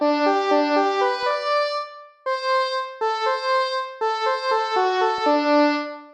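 Around 1.22 to 1.31 s, and again at 5.18 to 5.21 s, you get DAB burbling. Weak reception lets a small trickle of bit errors, around 0.1%, slip past error correction into the MP2 data. Wrong samples put short blips of noise into single sub-bands, giving brief burbling over the sound.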